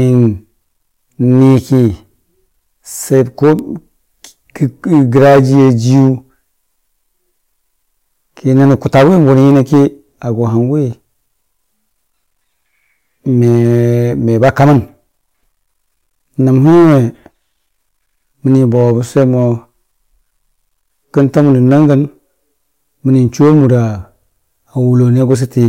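Hard clipping throughout: the speech is driven about 14 dB past what the signal path can carry, so a few percent of samples are cut flat, giving a harsh fuzz on loud syllables.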